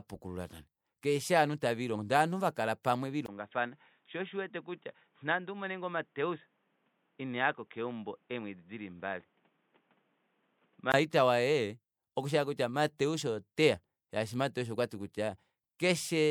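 At 2.83 s a pre-echo smears a sharp attack: codec noise spreads about 15 ms ahead of it, heard as a brief hiss and visible on a spectrogram as a faint vertical haze before the onset.

From 3.26 s, just before "waye okushi", the sound turns dull and boxy, likely because the input switched to a poorer device. A 20 ms gap marks the switch, the level drops by about 5 dB, and new background noise appears roughly 40 dB below the signal. On a spectrogram, nothing appears above 3.8 kHz until full bandwidth returns at 10.94 s.

Pre-echo recurs at 12.98 s (about 14 ms) and 15.79 s (about 11 ms).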